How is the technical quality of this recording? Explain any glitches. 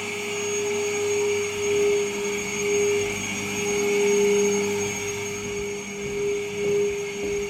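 The recording is marred throughout by sample clock jitter: timing wobble of a microsecond or two smears fast waveform slopes into roughness roughly 35 dB down, rising with loud, bright sounds and vanishing in silence, unlike steady background hiss.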